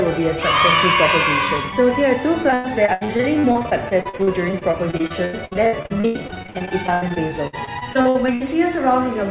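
From about 2.5 s to 8.5 s there's repeated packet loss, and it gives the sound that choppy, robotic edge. Dozens of short holes land one after another, the longest close to 100 ms, and each gets papered over by stretching the last bit of sound, so close to a third of that stretch is patched rather than real. Under that, the band stops at 4 kHz, which fits a G.711 mu-law call path.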